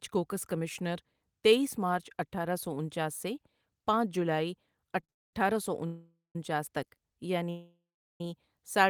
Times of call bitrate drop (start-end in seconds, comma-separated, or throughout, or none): none